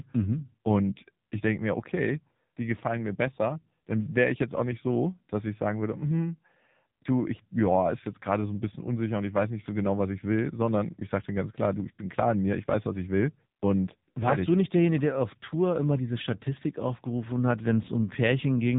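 Speech running through the AMR narrowband mobile codec throughout: nothing above 3.8 kHz, plus a buzzy, synthetic vocal-tract character that a plain low-pass filter wouldn't add, which fits heavy damage at about 6.7 kbps.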